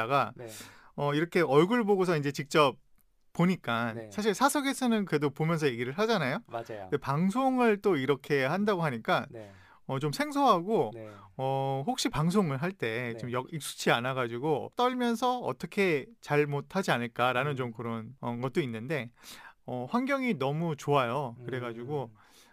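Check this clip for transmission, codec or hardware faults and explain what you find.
One hardware fault runs through the whole speech clip. Sample clock jitter, throughout: the converter clock wanders by a few microseconds, mistiming samples so steep waveform slopes gain error, heard as roughness about 30 dB below the signal, vanishing in pauses.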